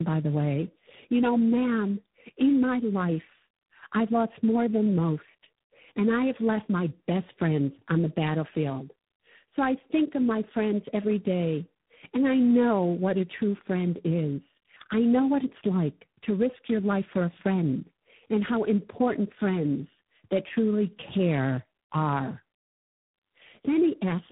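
Speech, with tandem speech coding throughout: the audio sounds like it was decoded and re-encoded by three low-rate speech codecs in a row, consistent with G.729A, AMR-NB and G.726 joined by G.711 links. Each stage compounds the last, leaving rough, warbly, muffled speech with nothing above 3.8 kHz.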